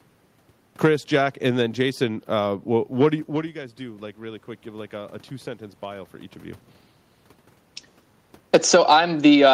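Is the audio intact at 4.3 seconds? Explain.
No. From 3.31 to 6.11 s, after "what what do you", automatic gain rising lifts the quieter input by about 4 dB, so the voice and room noise swell together.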